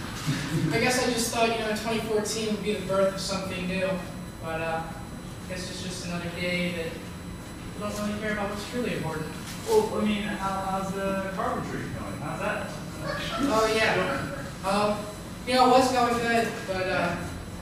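A USB whine runs through the whole clip: a fixed-pitch tone at 1 kHz from the bus's 1 ms frames leaking into power or ground, strongest at the 4 kHz harmonic, roughly 25 dB below the signal. Unlike mains hum, it sits on kHz multiples, not 50 or 60 Hz.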